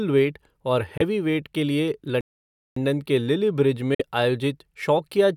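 At 0.97 s the speech cuts out for roughly 23 ms and resumes at 1.01 s, just before "के लिए", with the audio picking up further along as though it had kept running underneath. This is a Bluetooth dropout, likely caused by a packet that missed its delivery window to the headphones. The gap's length fits a single lost audio frame. A second dropout of the same kind runs from 3.94 to 4.01 s, about 46 ms. That length points to two consecutive frames going missing.

Between those, a playback stall opens at 2.21 s, right after "के लिए", and lasts 556 ms until 2.76 s, where the speech resumes with "के लिल्ली". Here the output went silent mid-flow, likely because the player was starved of data or its thread was blocked. At over half a second, the pause is clearly noticeable, and the sound carries on from where it halted.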